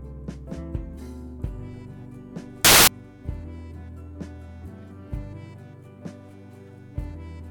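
From 2.65 to 2.87 s the music collapses into loud, harsh broadband noise: samples built from the wrong bytes, with misassembled byte order turning the fast-changing low bits into the dominant part of each value.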